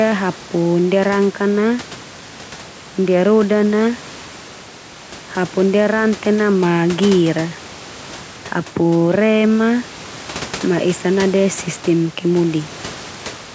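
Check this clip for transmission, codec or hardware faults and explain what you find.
No transmission, codec or hardware faults are audible here.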